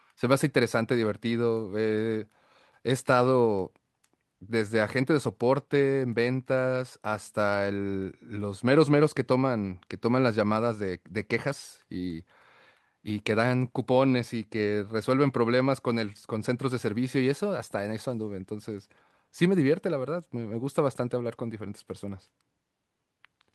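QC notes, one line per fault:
Nothing to flag on this speech recording; no faults turned up anywhere in it.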